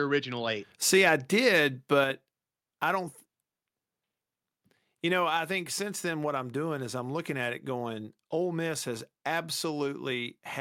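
At 2.04 s, just after "I did", the whole signal, speech and background together, drops by about 4 dB in a single step and stays there. This is likely a microphone volume stepped down by the call software. A compressor would ease the level down gradually and recover.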